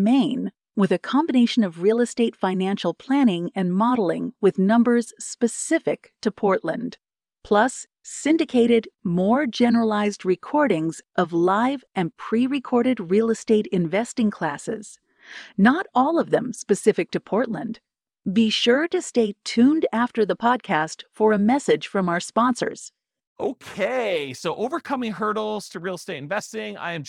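From 6.27 s to the end, the speech takes on a rough, metallic edge that is strongest on sibilants and bright consonants and drops away in the pauses. This is periodic clock jitter: interference is wobbling the converter's sampling clock at around 100 Hz, so every component of the speech gains sidebands roughly 100 Hz above and below it, with higher frequencies smeared more, giving the buzzy, grainy coating.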